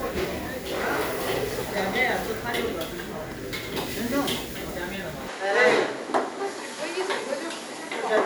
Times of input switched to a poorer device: 5.28-8.26

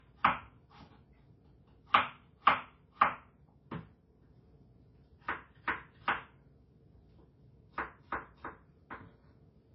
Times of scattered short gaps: none

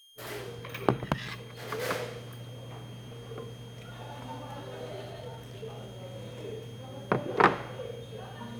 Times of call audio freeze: none

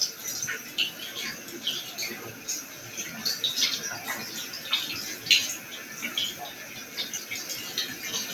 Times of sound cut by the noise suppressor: 2.33-2.83, 6.59-6.97

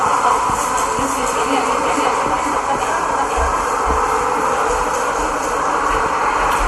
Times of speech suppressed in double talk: none

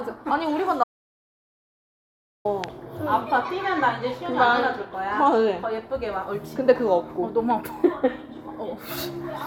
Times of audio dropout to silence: 0.84-2.45

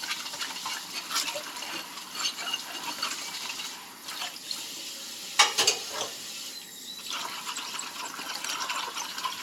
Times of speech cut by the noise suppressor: none

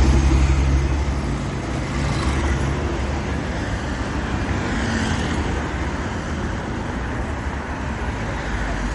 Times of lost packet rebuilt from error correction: none

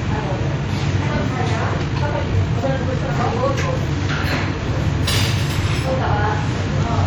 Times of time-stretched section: 1.75-3.91

